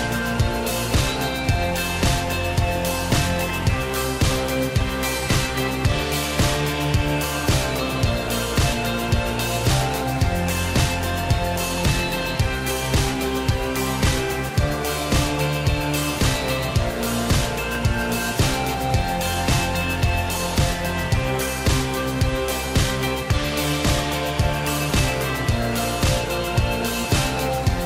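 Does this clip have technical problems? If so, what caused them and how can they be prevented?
Yes. Dropped samples are the likely cause: a fraction of a millisecond of audio goes missing, so the waveform jumps and gives single sharp clicks at 2.03, 11.78, 13.13 and 17.75 s. Prevent it with larger buffers and reliable, uninterrupted capture and transfer of the audio stream.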